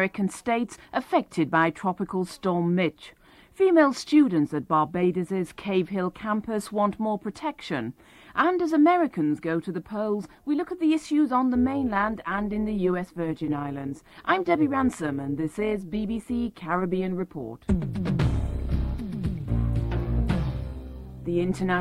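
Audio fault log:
11.55–21.81 s, overlap-add ripple: from 11.55 s to the end, the level swings by about 6 dB at around 150 Hz, heard as a metallic buzz with extra tones around each note, laid over the sound. The audio has been split into windowed frames and summed back with an overlap whose windows do not add to a constant gain, so the level dips and peaks once per frame, and that periodic modulation is the metallic buzz.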